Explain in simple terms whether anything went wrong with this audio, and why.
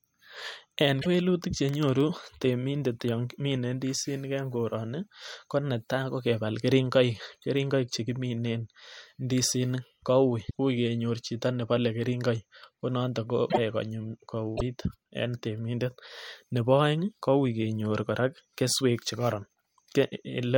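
Broken MP3 bit reservoir at 1.01, 10.49, 13.49 and 14.57 s: the speech briefly glitches and skips, likely because frames went missing and the next frames borrowed the wrong data.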